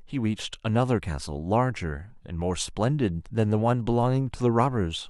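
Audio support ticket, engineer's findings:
DC step at 4.03 s: low thump under unbroken speech, so not a dropout or splice. Zero line jumps to an offset of about -34 dBFS, then decays back as a 2 Hz high-pass would. Probable converter recalibration or offset input switched in.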